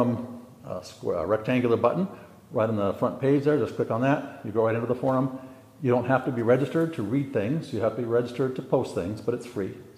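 No technical faults are audible anywhere in the recording.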